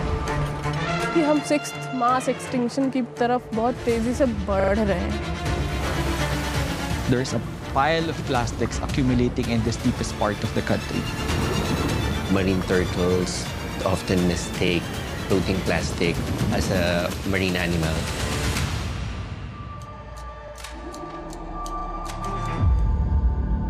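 At 4.6 s there's a repeated buffer: a 40 ms slice plays three extra times, a stutter to 4.72 s. Brief single repeats follow at 20.48 and 21.8 s. New audio arrived late each time, so the last chunk replayed with hard joins, though nothing seems lost.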